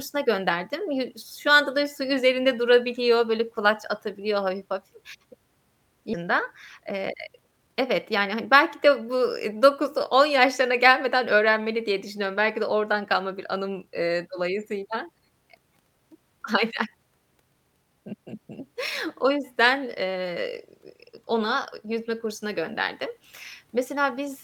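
A skip ahead at 6.13 to 6.24 s drops about 0.4 s of speech. Later audio was already queued, so playback jumps forward with no gap, joining the two sides of the cut almost directly and leaving part of the speech missing.

A jitter buffer speed-up follows from 6.81 to 9.02 s. The receiver held more audio than it aims for and trimmed short pitch-period pieces again and again, about 0.2 s in all. The speech runs at roughly 108% pace at unchanged pitch, sounding hurried.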